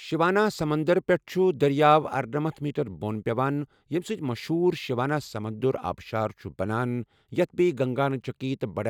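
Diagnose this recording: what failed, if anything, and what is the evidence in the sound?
No fault detected anywhere.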